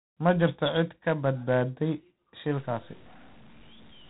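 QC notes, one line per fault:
Throughout: G.726 ADPCM at 24 kbit/s, plainly audible. Each sample is sent as a few bits describing its difference from an adaptive prediction, and at this rate the coarse steps leave a harsh, rasping hiss that rises and falls with the speech level. Nothing passes above 3.8 kHz. On a spectrogram there is a hard ceiling at 3.8 kHz with a grainy noise haze filling the gaps between harmonics, densest wherever the speech is loudest.
2.57 to 4.1 s: low bit depth without dither. The speech turns grainy and gritty here. The likely cause is truncation to roughly 7 bits with no dither, so the error tracks the signal, sitting only around 25 dB below it. A zoomed waveform shows visible staircase steps, and a spectrogram shows signal-shaped distortion rather than a smooth noise floor.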